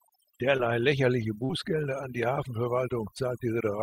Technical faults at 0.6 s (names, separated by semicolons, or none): overdone noise removal; short concealed packet loss